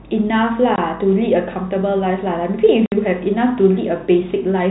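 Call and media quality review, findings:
Two hard dropouts, at 0.76–0.78 s (20 ms) and 2.86–2.92 s (60 ms). Packet loss filled with silence on the receive side: missing packets replaced by silence, gap lengths pointing to 10 ms packets. G.711 telephone band still audible around the holes.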